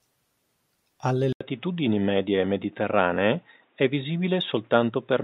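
A speech clip in which the recording path likely switched to a poorer input device at 1.33 s, such as a second microphone or a headset's call profile, and stayed on it to the end. The switch leaves a gap of 80 ms, after which nothing above 3.8 kHz gets through, so the sound turns dull and boxy. A different background noise also appears, roughly 45 dB below the speech, while the overall level stays about the same.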